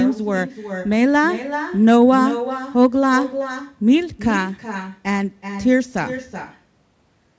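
From start to finish, the far end is playing the call through a loudspeaker with no echo canceller, so its microphone returns the speech after a round trip of roughly 400 ms. Every phrase is trailed by a thinner copy about 12 dB quieter.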